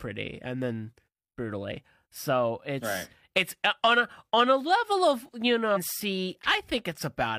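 At 5.72 to 5.78 s the speech jumps abruptly ahead with a brief blip, likely a stream segment skipped after one segment failed to load.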